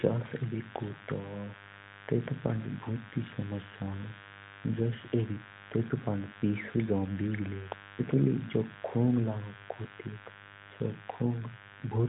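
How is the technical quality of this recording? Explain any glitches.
The main problem is a mains buzz sitting under the speech for the whole clip, fairly prominent at roughly 20 dB below the talker. The speech itself has the narrow, phone-like sound of an AMR narrowband mobile codec, with nothing above about 3.8 kHz and only light codec colouring, which fits the codec's highest-quality mode.

Mains buzz, start to finish: sharp switching spikes from something like a dimmer, a rectifier or a missing shield get in twice per 50 Hz cycle, and their harmonics climb well up the spectrum. You hear it as a constant, raspy buzz rather than a smooth hum.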